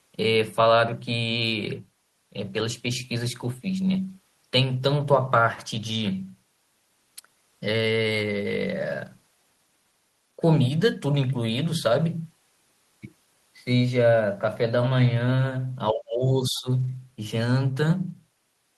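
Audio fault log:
15.92–16.68 s, speech suppressed in double talk: the speech dips by roughly 20 dB, shown as a waveform notch and a faded spectrogram band. The likely cause is an echo canceller ducking both sides during simultaneous talk.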